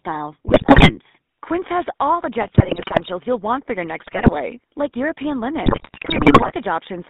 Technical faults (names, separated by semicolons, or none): GSM full-rate codec; GSM bit errors